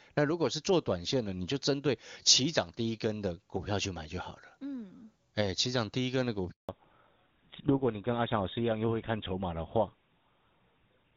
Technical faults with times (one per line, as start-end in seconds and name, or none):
6.51-6.69 handover gap
6.69-11.16 fallback to narrowband